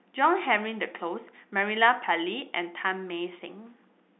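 No faults found: ordinary G.711 mu-law telephone speech, band-limited to roughly 200 Hz–3.6 kHz with nothing above 3.8 kHz, and no audible coding damage beyond the faint level-following quantisation floor expected of the format.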